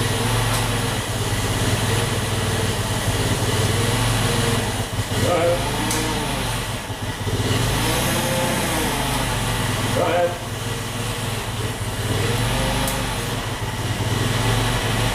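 No technical faults are audible anywhere in the recording.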